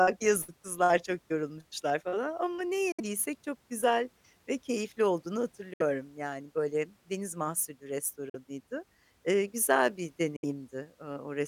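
Packets likely failed to reach the headphones in time, so the speech drops abruptly into silence and resumes further along: Bluetooth dropouts at 2.92, 5.73, 8.29 and 10.36 s, each 40 to 65 ms long.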